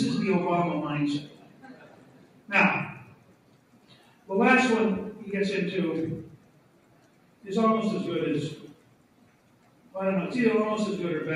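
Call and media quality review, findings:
Noise suppressor applied to music or sounds, whole clip: level pumps and thins by around 10 dB. Speech-tuned suppressor is treating sustained tones and ambience as noise, letting attacks through while holds and tails get pulled down. Probably an NS stage left enabled in the chain.

Sound cut by the noise suppressor, at 1.2–2.51 s, 2.95–4.29 s, 6.26–7.46 s, 8.68–9.94 s: steady or decaying stretches sink by about 10 dB for roughly a second or more each. Suppressor is clamping these as noise and cutting decays short.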